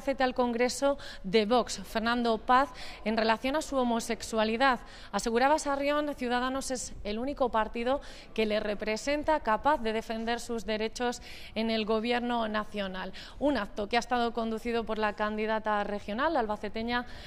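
No technical faults are audible.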